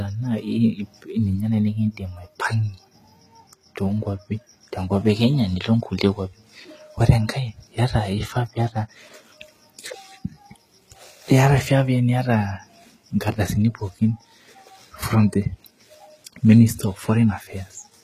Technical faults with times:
0.00-18.04 HE-AAC compression

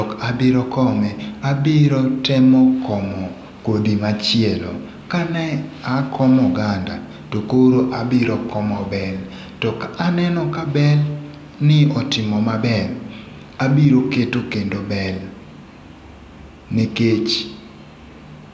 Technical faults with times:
none

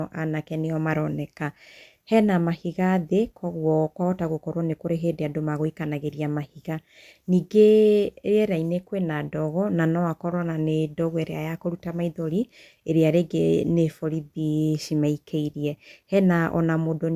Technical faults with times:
none

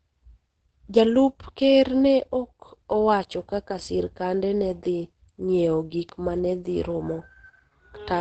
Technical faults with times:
0.00-8.20 Opus compression

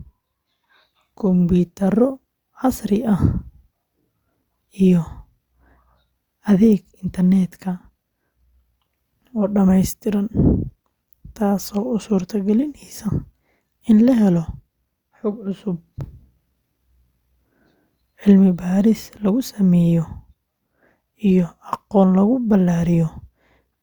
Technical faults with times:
none

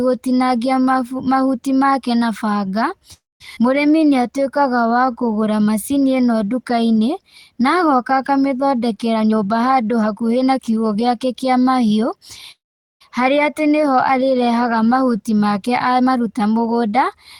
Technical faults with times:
3.13-3.42 call audio freeze
3.56-3.59 skip ahead
3.91-5.34 jitter buffer slow-down
9.13-10.77 jitter buffer speed-up
12.51-13.02 call audio freeze
15.67-16.98 jitter buffer speed-up

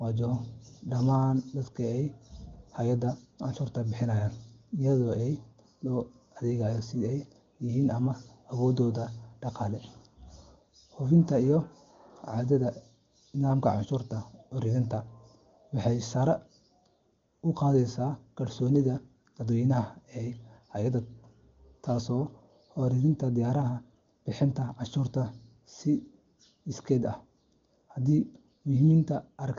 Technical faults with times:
none

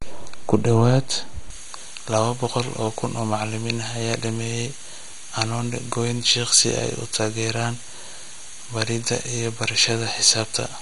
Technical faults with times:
0.00-10.82 MP2 compression
1.50-10.82 pre-emphasis left on

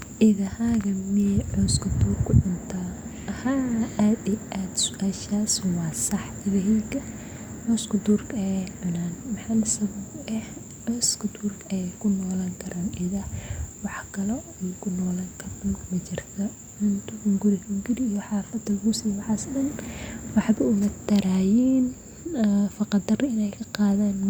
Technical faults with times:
none

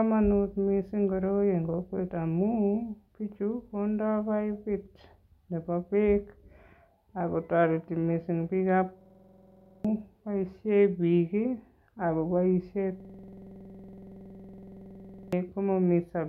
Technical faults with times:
9.01-9.85 system hang loop
13.00-15.33 system hang loop

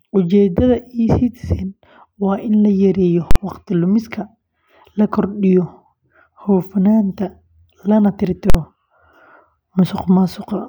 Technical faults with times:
3.31-3.36 invalid numbers at full scale
8.50-8.54 invalid numbers at full scale

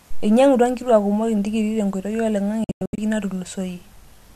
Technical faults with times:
2.64-2.98 digital broadcast dropout

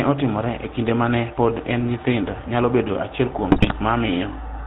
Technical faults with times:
0.00-4.66 GSM full-rate codec
3.52-3.75 GSM bit errors

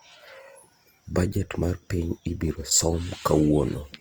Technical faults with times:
0.00-4.01 Opus compression

